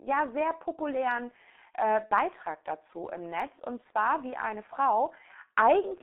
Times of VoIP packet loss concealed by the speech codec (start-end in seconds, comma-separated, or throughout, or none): 2.06-2.11